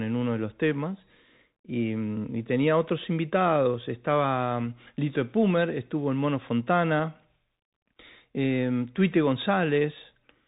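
Speech runs through the Bluetooth CVSD headset codec for the whole clip. Nothing above about 3.8 kHz survives, so the sound is narrowband and boxy. CVSD sends one bit per sample, just up or down, and adapts its step size as it goes. The damage is plainly audible. Fast, bright sounds outrun the step and distort, sibilants turn scratchy, and a granular hiss sits under everything. This fits a 64 kbps headset link.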